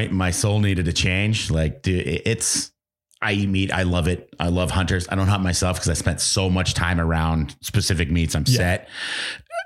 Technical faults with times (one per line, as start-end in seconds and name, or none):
none